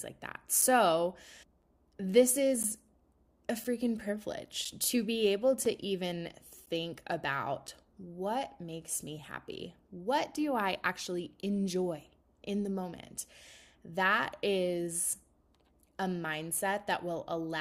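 Starting at 0.61 s and recurring at 1.62, 2.63, 3.64, 4.65, 5.65, 6.66 and 7.67 s, the speech is broken by short holes of roughly 5 to 12 ms of hard-edged silence, a gap between stream segments. The one-second spacing fits segments whose timestamps don't quite meet, leaving silence at each join. Unlike packet loss, nothing is missing: each hole is inserted time, and the speech resumes exactly where it stopped.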